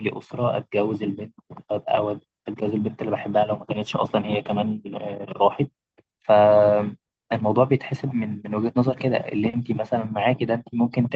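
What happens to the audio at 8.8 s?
Nothing goes wrong at 8.8 s: the speech carries on intact through that moment, with the same band-limited call-codec character it has around it and no dropout, glitch or distortion.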